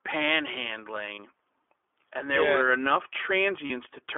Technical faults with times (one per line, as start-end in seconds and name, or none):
0.00-4.18 iLBC codec
1.14-1.20 lost iLBC frames
3.66-3.71 lost iLBC frames